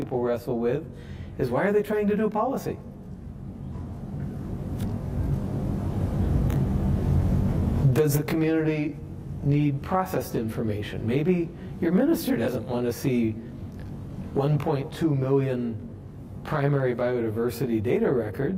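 Rough, slightly doubled colouring runs throughout. It comes from channel delay (comb filtering): one channel lags about 20 ms, so summing to mono notches the spectrum from roughly 20 Hz up.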